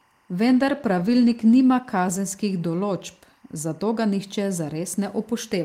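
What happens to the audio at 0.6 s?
At 0.6 s the sound is inside a call bitrate drop that runs from 0.47 s to 2.91 s. The connection's bandwidth estimate fell, so the encoder spent far fewer bits on the audio. The sound turns rough and watery, and the top end goes dull. That loss of treble fits a fall from around 40 kbps to around 16 kbps. The coarsest stretch lasts about 1.1 s before quality climbs back.

Timecode bleed is also present at 0.6 s, as it is across the whole clip. Linear timecode from a nearby track or cable has leaked into the audio. It is a square wave flipping between tones near 1 kHz and 2 kHz, paced at 23.976 frames per second. It sits very low, roughly 40 dB under the speech. It is heard as a faint, steady chirping warble behind the sound.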